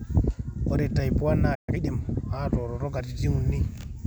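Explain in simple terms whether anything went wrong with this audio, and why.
At 1.54 s the speech suddenly cuts to silence for about 130 milliseconds, then picks up again at 1.69 s. That is a playback stall. The player most likely ran short of audio data or was briefly held up, so nothing came out until it recovered.

Right after, from 1.69 to 1.81 s, the speech rushes along at about twice its normal speed without sounding higher-pitched. That is time-compressed catch-up. The player trimmed and blended tiny slices to make up the lost time.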